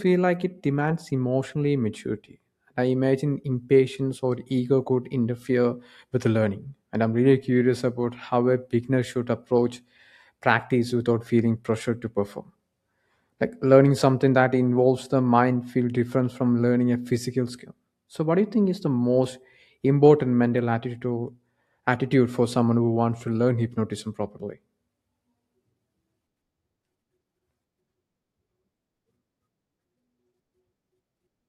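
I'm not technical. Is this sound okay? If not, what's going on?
Yes, no faults heard.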